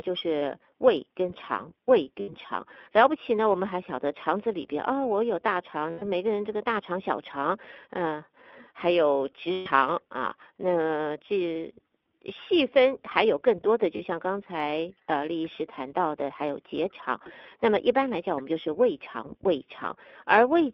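The whole recording passes through the iLBC codec, and the damage is plainly audible: a rough, synthetic edge, with the band held between about 250 Hz and 3.6 kHz. A spectrogram shows nothing above 3.6 kHz. The sound fits iLBC's 15.2 kbps mode with 20 ms frames.

Lost iLBC frames occur at 2.20–2.30 s (80 ms), 5.90–6.03 s (120 ms), 9.52–9.69 s (140 ms), 12.02–12.06 s (40 ms), 13.96–14.02 s (40 ms) and 17.25–17.30 s (20 ms). During each gap the decoder repeats the last pitch cycle mixed with noise, so the gap sounds like a held, buzzy vowel. The waveform shows one cycle tiled over and over, and a spectrogram shows flat harmonic stripes. Each iLBC frame decodes on its own, so the sound is right again almost at once after every gap.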